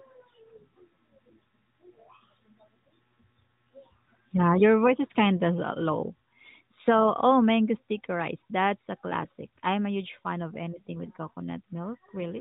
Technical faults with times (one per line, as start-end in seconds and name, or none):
none